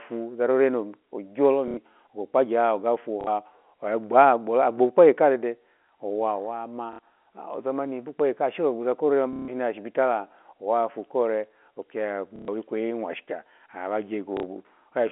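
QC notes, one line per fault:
1.68 to 14.43 s, packet loss with last packet repeated: dropouts at 1.68 s (90 ms, before "ogo kpagye"), 3.21 s (60 ms), 6.93 s (60 ms, before "ozamani ashe"), 9.33 s (150 ms), 12.36 s (120 ms, between "owafu ore oki ya" and "kweyi mwashika") and 14.37 s (60 ms). Each gap is filled by replaying the last packet, which fits 30 ms packets. The longer runs buzz near 33 Hz as a robotic stutter over the G.711 telephone band.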